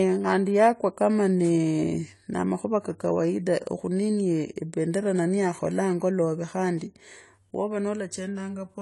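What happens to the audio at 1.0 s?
At 1.0 s the speech carries AAC compression, as it does for the whole clip. Nothing sounds above about 11.5 kHz. The tone is dull and smeared, with a fizzy, warbling edge. The damage is plainly audible, likely from AAC-LC at a bitrate around 32 kbps.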